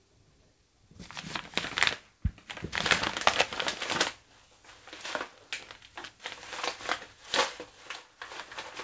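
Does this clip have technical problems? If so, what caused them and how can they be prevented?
No, there are no technical problems in this audio.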